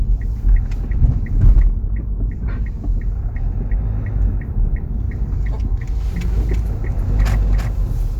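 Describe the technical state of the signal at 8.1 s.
A doubled audio track runs from 6.28 s to the end, covering 8.1 s. A full-band copy trails the original by roughly 300 ms at around 5 dB lower, with no decay or room colour, likely from a second, slower capture path.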